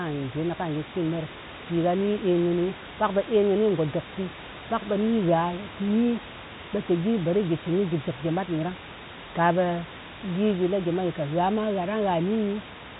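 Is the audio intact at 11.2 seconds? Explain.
Yes, the audio is intact at 11.2 seconds: there is no fault there, only the room noise about 13 dB below the speech and the narrow telephone band of G.711 coding, with nothing above roughly 3.8 kHz.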